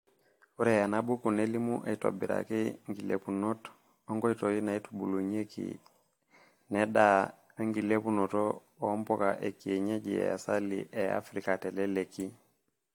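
Generation loss runs through the whole speech clip: the sound is swirly, smeared and hollow, with blurred attacks and nothing above 19.3 kHz. The likely cause is repeated lossy re-encoding, around four passes, consistent with AAC-LC at 96 kbit/s, each stacking fresh quantisation noise.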